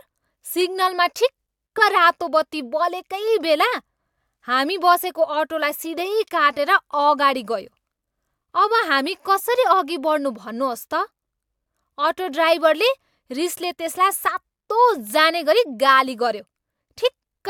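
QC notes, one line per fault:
No technical faults can be heard in the speech recording, and the signal stays steady and continuous from its opening to its close.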